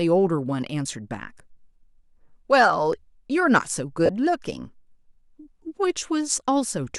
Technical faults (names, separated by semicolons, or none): lost LE Audio frames